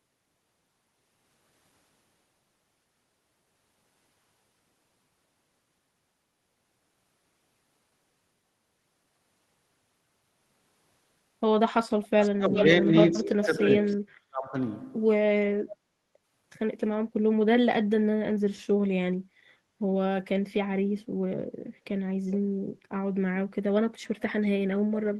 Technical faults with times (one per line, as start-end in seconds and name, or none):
12.03-12.63 echo leak
12.32-14.56 speech suppressed in double talk
13.86-13.96 echo leak
15.71-15.75 echo leak
19.13-19.36 background gated by the echo canceller